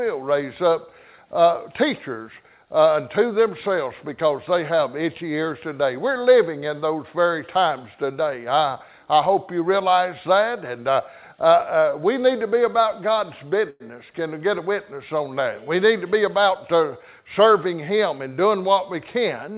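At 13.70 to 13.82 s there is a short stall from a late packet. The jitter buffer ran dry, so the receiver stretched the last sound for about 100 ms, then resumed with nothing lost. On a spectrogram it appears as a frozen, horizontally smeared patch. In the waveform it shows as repeated near-identical cycles.

Two jitter buffer speed-ups follow, at 16.07 to 16.77 s (104%) and 17.20 to 18.20 s (106%). Once the extra delay had built up, the receiver cut short pitch-period pieces, trimming a few tens of milliseconds from the first stretch and nearer 70 ms from the second. The sound runs faster at unchanged pitch, and the second stretch sounds a little hurried. In a spectrogram the harmonic spacing stays the same while events squeeze closer in time, and the waveform shows no gaps.

The call path's band limit is visible throughout as empty spectrogram above 4 kHz, which fits a narrowband G.711 codec.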